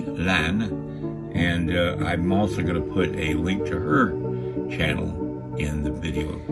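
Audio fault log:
No faults detected anywhere in the clip.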